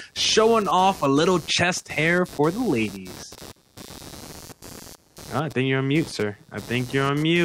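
Throughout the recording, computer activity noise sits under the speech: a buzzing pulse train repeating at around 150 Hz, roughly 20 dB below the voice. Processor and peripheral load currents are disturbing the audio ground, so unlike steady mains hum, it wavers with machine activity rather than the speech.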